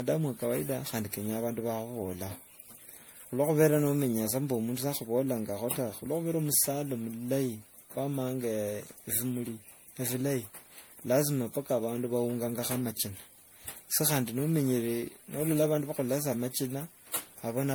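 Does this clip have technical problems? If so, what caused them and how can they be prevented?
Yes. Throughout the speech there is generation loss: the sound is swirly and hollow, consonant attacks are smeared, and the degradation is worse than a single pass at a bitrate around 96 kbit/s would give. The likely cause is MP3 encoding repeated about seven times, each pass re-quantising on a shifted frame grid so the errors pile up. A spectrogram would show ragged holes and smearing, with nothing above 20.8 kHz. To prevent it, keep a lossless master and encode to MP3 only once, at the final step.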